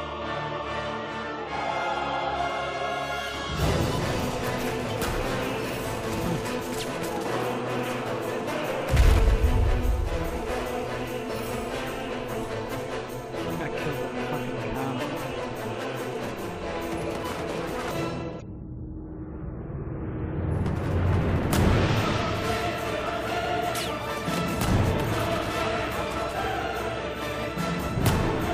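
At 18.38 to 18.42 s, a brief glitch cuts through the sound. It comes from damaged data in a compressed stream. Part of the encoded data is corrupt there. The decoder cannot read those frames properly and loses sync. It then hunts for the next valid frame header. The result is a glitch lasting about 40 ms. The same fault returns at 24.23 to 24.27 s. That second blip has the same short length.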